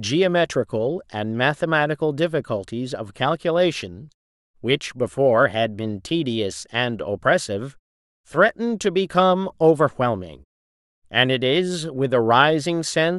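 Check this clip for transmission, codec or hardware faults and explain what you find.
No transmission faults detected.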